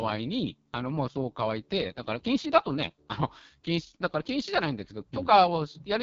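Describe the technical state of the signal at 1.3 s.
At 1.3 s the speech carries AMR wideband (HD Voice) codec damage, present throughout the clip. The roughness and raspiness of a heavily starved pulse-driven vocal tract model suggest the lowest 6.6 kbit/s mode. Content stops near 7.3 kHz, with the top band noise-filled.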